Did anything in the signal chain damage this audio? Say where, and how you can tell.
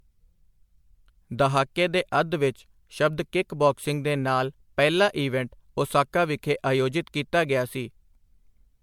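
Yes. Generation loss runs throughout the speech, at the codec stage. The sound is swirly, smeared and hollow, with blurred attacks, and worse than a single lossy pass would leave even though content still reaches about 20 kHz. The likely cause is repeated MP3 decoding and re-encoding, several times over, at what sounds like 96 kbit/s. Each pass quantises again on a shifted frame grid, so noise and spectral holes pile up.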